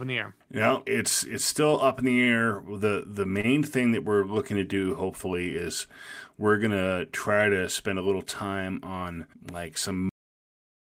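At 3.41 s the speech briefly stalls, a short stall from a late packet. A packet arrived late and the jitter buffer ran dry. The receiver held the last sound for about 29 ms, then resumed where it left off. Nothing is lost. The sound is simply drawn out slightly.

At 10.09 s the speech has a cut-off end. The final buffers were never written or played. The audio stops mid-sound and falls straight to digital silence with no natural decay, leaving the ending abruptly truncated.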